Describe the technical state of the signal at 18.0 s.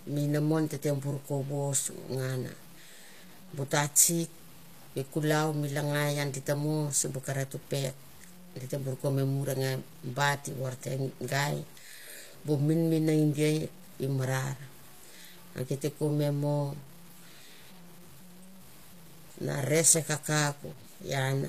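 At 18.0 s the speech carries a grainy, rough distortion that moves with the sound, thickening on quieter syllables and sitting about 25 dB below the signal. This runs through the whole clip and is likely low bit depth without dither: truncation to something like 8 bits leaves an error that tracks the waveform.

Also present throughout, and audible here, is plainly audible codec damage: s sounds come out metallic and lispy, and nothing reaches above 14.9 kHz. That points to HE-AAC compression at around 24 kbps, where the upper band is rebuilt by copying lower bands upward, so its harmonics no longer line up.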